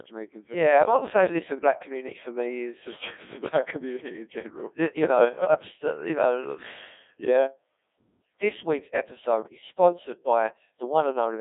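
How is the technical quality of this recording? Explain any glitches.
Poor: the speech is robotic and buzzy for the whole recording, squeezed into a narrow band from about 250 Hz to 3.6 kHz. This is Codec 2 vocoder damage, and it is heavy. The decoder rebuilds the voice from sine waves using only pitch, voicing, energy and a spectral envelope, so the original waveform is lost. The result points to a very low rate of around 1.6 kbit/s.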